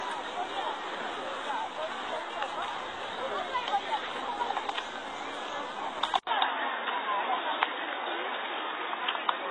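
Right from the start the whole recording has that layered, smeared quality of transcoding between lossy codecs: you can hear the swirly, thin texture of a very low-rate spectral-replication codec with a second, cleaner AAC-style pass stacked on top, which fits something like HE-AAC at 16 kbit/s re-encoded to AAC-LC at 48 kbit/s. The later pass can't restore what the first threw away, so there's nothing above 10 kHz anywhere, and both sets of artefacts sit together.

At 6.19 s there's a short gap, about 80 ms, and then the sound drops to something boxy and dull that lasts to the end. That's most likely the input switched to a poorer device, say a headset's call profile taking over. The band now stops at 3.8 kHz, the level shifts by roughly 5 dB, and there's a new noise floor sitting around 40 dB below the signal, so the change in character is abrupt.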